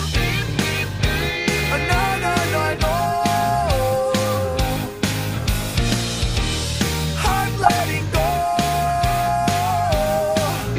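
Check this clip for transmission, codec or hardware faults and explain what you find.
One fault: DAB burbling from 7.62 to 7.80 s, where weak reception lets bit errors slip past error correction, corrupting MP2 samples across what sounds like about eight frames. Wrong samples put short blips of noise in single sub-bands rather than the clean gap of a dropout.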